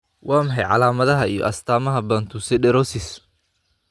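No technical faults can be heard in the speech.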